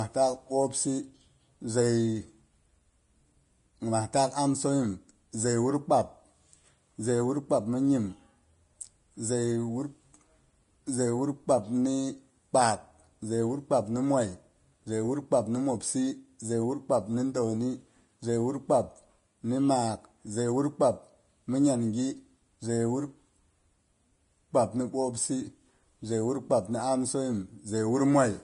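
Speech with plainly audible Vorbis compression throughout. Nothing is heard above 10.5 kHz. The treble turns hissy and grainy, and consonant attacks blur. The likely cause is low-quality Vorbis encoding, coarse enough to suggest a bitrate of around 31 kbps.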